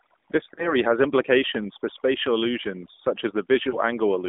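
From start to finish the background is unnaturally dead, falling to near silence between phrases with twinkling specks. This is overdone noise removal. The reduction was set so aggressively that any frequency band sitting close to its noise estimate was pushed far down or cut off entirely, and the quieter parts of the speech were removed along with the hiss.

Throughout, the speech is also boxed into a narrow telephone band of roughly 200 Hz to 3.6 kHz and has a buzzy, synthetic edge. That is the AMR narrowband mobile codec at work, with plainly audible damage. The codec samples at 8 kHz and rebuilds the speech from a vocal-tract model driven by sparse pulses. At the low rate this clip points to, around 7.4 kbps, the synthetic quality comes through clearly.

From 0.54 to 0.76 s, the speech smears and stretches before sagging, then comes back rough. These are lost AMR speech frames. About 40 ms of data, consistent with two corrupted frames, failed its checksum. 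The decoder repeated the last good pitch and vocal-tract settings with decreasing gain, so the sound is drawn out and fades instead of cutting off cleanly.

At about 3.7 s, a single lost frame of about 20 ms produces a brief dip, recovering by 3.79 s.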